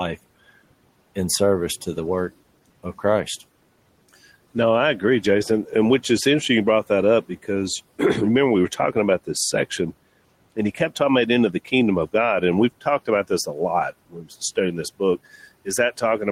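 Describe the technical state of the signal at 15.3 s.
At 15.3 s the signal is intact, with only the room's own background noise sitting about 23 dB below the speech.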